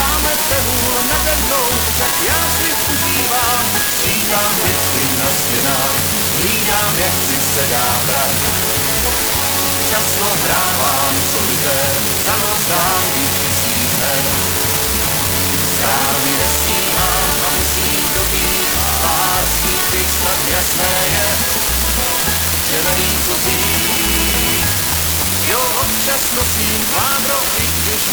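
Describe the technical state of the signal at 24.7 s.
At 24.7 s the signal carries an unreliable data bit, present across the whole clip. One marginal data line flips its bit in a random share of samples, adding identical spikes of about -5 dBFS that produce a steady crackle or fizz, audible even in pauses.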